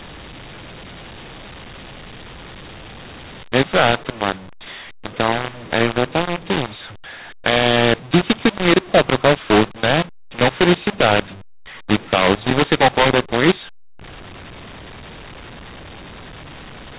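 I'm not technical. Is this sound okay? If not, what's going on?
No. From start to finish the speech is harsh and gritty, and the pauses are filled with hiss instead of silence. This is a mu-law and A-law mix-up: telephone audio stored as A-law was played back as mu-law, so loud and quiet parts come out at the wrong levels.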